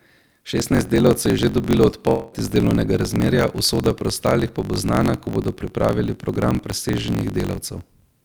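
A speech clip with three faults. Throughout, a block size mismatch (truncated) puts a steady buzz at about 46.9 Hz under the speech, and the speech runs about 1.12 times fast at roughly normal pitch. This fits a stage reading 1024-sample blocks while the stage before writes longer ones, so the tail of each block is discarded. From 0.60 to 0.63 s there is a short concealed packet loss: about 20 ms never arrived, and the receiver filled about 12 ms by extending the preceding sound before blending back, leaving a brief smear. From 2.09 to 2.34 s, roughly 260 ms of speech is replaced by an extended, fading synthetic continuation of the last sound, with no full silence before the speech resumes further on. The likely cause is a long network dropout.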